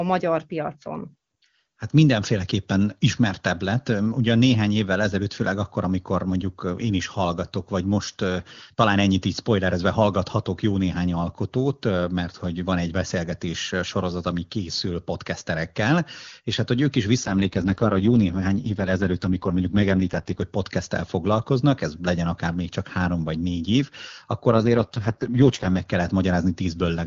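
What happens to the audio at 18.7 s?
An AMR rate drop spans 17.23 to 20.42 s. The link forced the codec down, likely to its lowest 6.6 kbit/s mode, so the speech turns rough and raspy without losing band or continuity.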